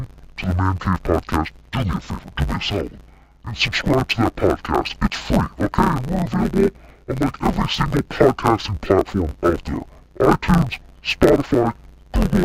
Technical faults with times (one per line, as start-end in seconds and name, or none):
0.00-12.44 interleaved audio read as planar